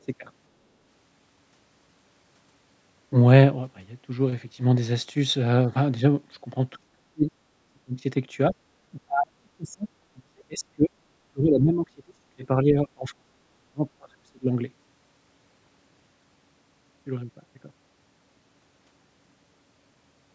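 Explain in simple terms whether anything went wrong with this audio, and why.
The speech keeps sinking or cutting out in pieces between 6.77 and 14.5 seconds: at 6.77 to 7.31, 7.48 to 8.04, 8.94 to 10.94, 11.31 to 13.82, and 13.98 to 14.5. At its worst it almost vanishes. This is most likely speech suppressed in double talk. Both ends of the call were talking at once, and the echo canceller couldn't tell this talker apart from the sound coming out of the loudspeaker, so it turned everything down together.

There's also a brief dip in the room sound at 8.54 to 8.64 seconds, about a tenth of a second. That's background gated by the echo canceller. While the loudspeaker was playing, the canceller clamped down on the microphone, so the room noise behind the speech dropped away for a moment. It came back as soon as the canceller let go.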